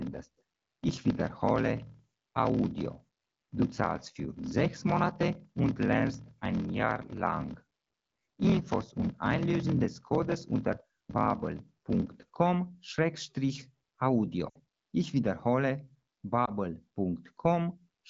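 From 0 to 12.27 s the speech carries a block size mismatch (padded): each block is shorter than the next stage reads, and the shortfall is zero-filled. A waveform shows regular flat gaps, and a spectrogram shows vertical stripes at about 41.7 Hz, heard as a buzz. The speech runs at 0.889 times normal speed with timbre unchanged, which fits 1024-sample blocks being read as roughly 1150-sample blocks.

Lost AMR speech frames then appear in the AMR-WB stream, whose 12.65 kbit/s coding is otherwise clear. From 14.49 to 14.59 s about 60 ms is lost, which fits three 20 ms frames. The decoder repeats the last pitch and spectral shape with falling gain, so the sound smears and fades quickly. At 16.45 s a single 20 ms loss gives a brief warbling dip. On a spectrogram, both show as blurred, repeated harmonics that thin out.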